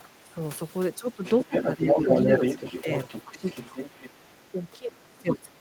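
A speech recording with two echo-canceller faults. The talker's voice repeatedly dips, by roughly 10 to 20 dB, at 0.0–0.38, 0.98–1.24, 1.45–2.07, 3.23–3.46 and 3.68–3.77 s, and from 4.51 s to the end. This is speech suppressed in double talk. The likely cause is the canceller mistaking the talker for loudspeaker echo and turning everything down. The other side's voice is also leaking through, from 1.25 to 4.47 s, at about the same level as the talker. The echo canceller likely failed to remove the far-end loudspeaker sound picked up by the microphone.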